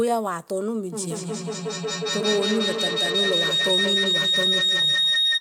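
From 0.92 s to the end there's a feedback howl. Two devices in the same room are sharing the call, and the loop from microphone to loudspeaker comes back a little louder each trip, so the repeats grow instead of dying away. They narrow to a tone around 4 kHz and pulse roughly every fifth of a second, the loop's delay. At its peak it sits about 3 dB above the speech, and nothing breaks the loop before the clip ends.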